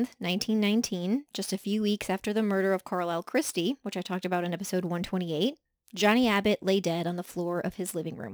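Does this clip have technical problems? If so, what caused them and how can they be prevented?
Yes. Sample clock jitter runs through the whole speech recording: the converter's clock wanders by something like 7 microseconds, so each sample is captured a little early or late, and the error is largest where the waveform changes fastest. It shows up as a hiss about 25 dB below the speech that swells on loud, bright syllables and disappears in pauses. On a spectrogram this is a diffuse high-frequency haze that follows the speech energy, and the waveform looks clean in silent gaps. A stable, low-jitter clock source with good clock distribution to the converter prevents it.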